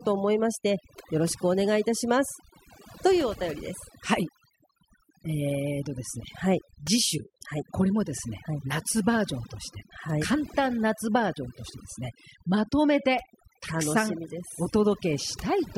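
From start to finish the background sinks to near silence broken by twinkling specks. This is overdone noise removal: a noise reducer set too strong cuts individual frequency bands near its noise estimate, taking quieter parts of the voice with them.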